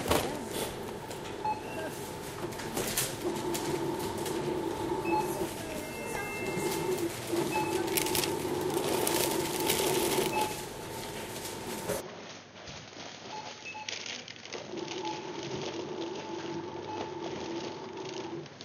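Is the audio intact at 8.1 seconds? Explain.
Yes, the audio is intact at 8.1 seconds, with no audible fault at that moment.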